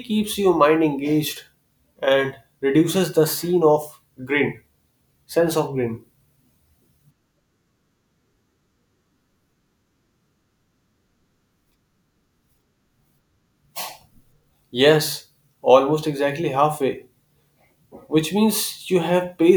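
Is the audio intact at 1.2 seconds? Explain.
Yes, the speech at 1.2 seconds is intact, with no dropout, glitch or distortion at that moment.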